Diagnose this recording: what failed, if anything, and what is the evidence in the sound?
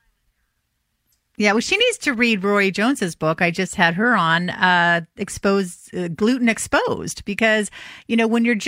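Nothing failed in this speech recording; the sound carries no evidence of a fault at any stage.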